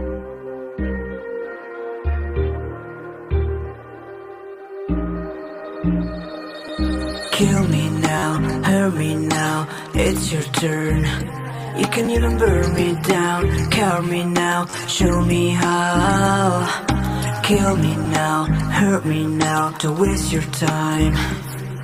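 Brief clicks and short buzzy stutters at 6.68 s, 8.18–8.22 s, 12.05–12.08 s, 14.70–14.73 s and 18.05 s come from a repeated buffer. New audio arrived late, so a piece of about 11 ms, which fits a 512-sample buffer, replayed with hard joins.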